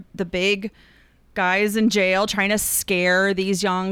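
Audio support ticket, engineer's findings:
No fault found on listening. Nothing further to flag in this speech capture.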